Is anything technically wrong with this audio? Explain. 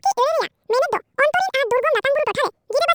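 Yes. Throughout the clip the speech runs at double speed and sits a full octave high, 12 semitones up, giving it a chipmunk-like, hurried quality. This is a wrong sample rate fault. The samples are being played back twice as fast as they were captured, with no rate conversion in between, so timing and pitch shift together by the same factor of 2.0. That points to audio recorded at 24 kHz being played at 48 kHz.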